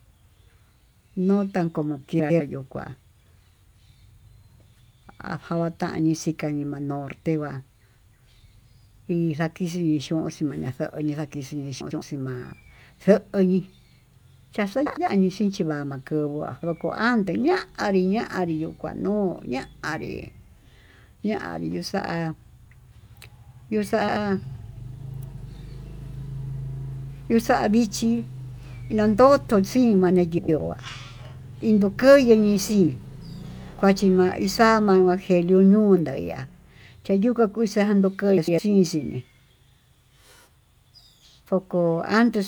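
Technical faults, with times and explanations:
2.19–2.41 (between "no tan como" and "yo kuá"), 11.80–12.02, 14.86–15.08, 24.00–24.17, 30.38–30.59 and 38.37–38.59 s, frames out of order: in each stretch two adjacent blocks of about 105 ms (about 78 ms at 24.0 s, which fits three frames rather than four) play swapped. The speech stutters briefly, and no time is lost. The spectrogram shows abrupt vertical discontinuities where formant tracks jump, and the waveform shows envelope steps at each join.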